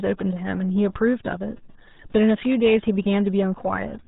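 From start to finish the speech sounds muffled and gargly, with nothing above about 3.8 kHz. This is the RealAudio 14.4 codec, a dial-up-era speech coder. Its heavy damage fits an 8 kbit/s stream, too thin to carry detail.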